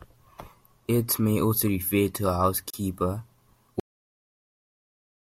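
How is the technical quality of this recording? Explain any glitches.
Two glitches mar the recording: a brief dropout in the middle of the speech and an abrupt end.

At 2.70 s, just after "also refer to a", the sound cuts to silence for about 33 ms and then resumes. This is likely a Bluetooth stall: interference delayed packets, the headphones' buffer emptied, and playback paused until the resent data arrived.

At 3.80 s the speech stops mid-sound and drops straight to digital silence, with no natural decay, for the rest of the clip. This is a cut-off end: the final buffers were never written, so the audio simply ends.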